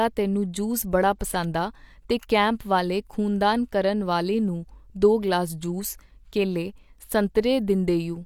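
No technical faults can be heard anywhere in the speech recording.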